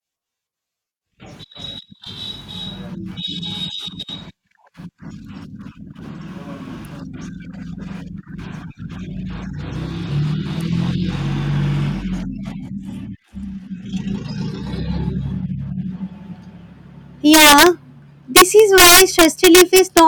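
A speech recording with integer overflow near its end. From 17.34 to 17.66 s, and again from 18.36 to 19.99 s, loud peaks break into violent cracks. They are far harsher than ordinary clipping. The signal was driven about 4 dB and then about 5 dB past the integer limit. The excess was not limited. Instead, each peak wrapped around to the opposite sign, jumping across the full range in one sample.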